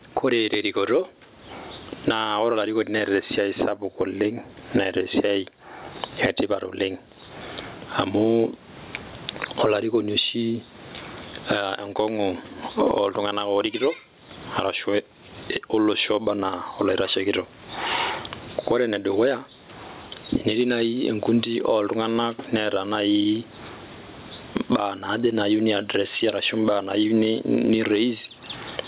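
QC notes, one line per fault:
Throughout, gain pumping: the gain sinks each time the speech gets loud, with a swing of roughly 30 dB. Loud and quiet syllables sit close together and sound squashed. The likely cause is input gain set far too high with a fast limiter clamping down on each peak. All of this sits within the narrow, 4 kHz-limited phone-band sound.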